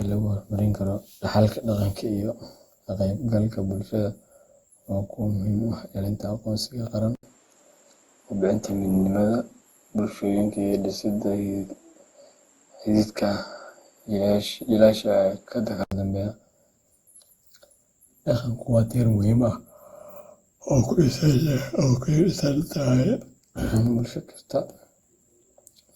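Throughout, the speech sounds swirly, smeared and hollow, with blurred attacks. This is likely generation loss, from re-encoding with Opus at 64 kbit/s around ten times.

At 7.15 s an input switched to a poorer device, likely after an 80 ms silence. The band narrows to 12.1 kHz, with new noise about 45 dB down. Full band returns at 15.92 s.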